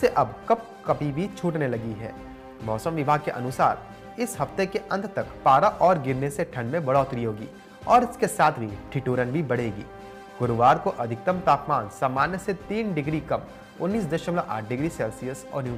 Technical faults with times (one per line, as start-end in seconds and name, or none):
none